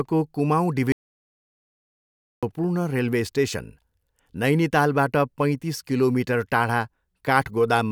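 From 0.92 to 2.43 s, an audio dropout to silence, likely a lost input: the waveform flatlines and the spectrogram goes blank until "रेलवे स्टेसन".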